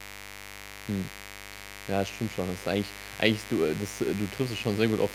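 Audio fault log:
throughout mains buzz: a steady, raspy buzz sits under the speech at roughly 15 dB below it, fed by a 50 Hz supply whose switching spikes arrive twice per cycle, every 10 ms. Those sharp edges spread energy into a dense comb of harmonics reaching several kilohertz, which is why it rasps rather than hums. A spectrogram shows unbroken horizontal lines stacked at regular spacing across the whole clip; the waveform shows narrow spikes repeating every 10 ms, visible in pauses.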